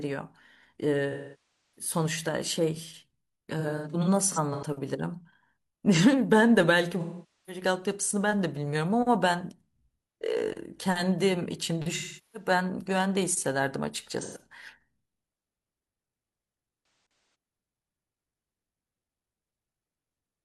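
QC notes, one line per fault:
1.12–1.90 s, 3.59–4.64 s, 7.00–7.62 s, 11.96–12.49 s, 14.21–14.42 s, 16.83–17.34 s: AAC frame loss with concealment. The decoder lost blocks of audio and filled each gap from the last good spectrum. The longest gap, at 1.12 s, lasts about 640 ms, so the sound decays toward silence and then fades back in. The gaps at 3.59 s and 16.83 s are short broken bursts, which give smeared, noisy patches rather than fades.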